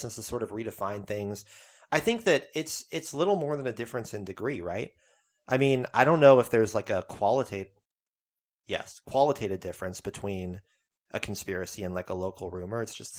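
The speech signal shows no technical faults, and its Opus voice coding at 24 kbps in hybrid mode keeps the full audio band.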